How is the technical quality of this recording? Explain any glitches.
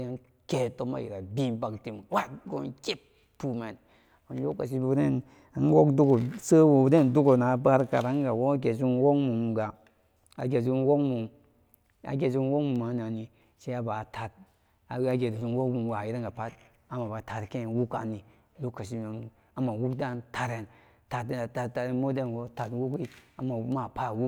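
The recording has one clocking fault. Word clock ticks, 0.21 to 23.72 s: an unlocked receiver clock, about 30 ppm off, slips one sample roughly every 0.7 s, producing around thirty ticks.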